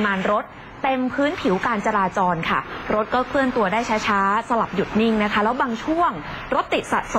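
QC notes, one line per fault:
No technical faults were detected anywhere in this audio.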